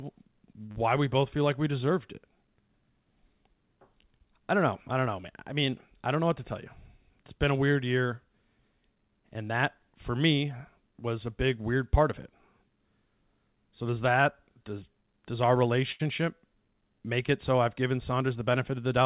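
At 0.66 s a packet arrived late and the jitter buffer ran dry, giving a short stall from a late packet. The receiver stretched the last sound for about 37 ms, adding 37 ms of delay, then resumed where it left off. Nothing is lost, but the sound hangs slightly too long with a slight buzz or dip.

From 0.72 to 0.77 s comes short concealed packet loss. About 40 ms of audio never reached the decoder in time, and the receiver extrapolated roughly 36 ms from the preceding sound before blending back. It comes across as a brief smear or wobble, and a quick consonant may disappear.

Between 6.74 and 7.63 s the jitter buffer held more audio than its target, so it performed a jitter buffer speed-up. It cut around 40 ms in small pitch-period slices, making playback about 104% of normal speed at unchanged pitch.

At 15.92 s a second short stall from a late packet occurs, lasting until 16.02 s. The buffer emptied again, and the receiver held the last sound for about 77 ms, adding that much delay before continuing. 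This longer hold comes across as a drawn-out moment with a slight buzz or dip.

Throughout, the WebRTC call path leaves nothing above 4 kHz, which fits a narrowband codec such as G.711.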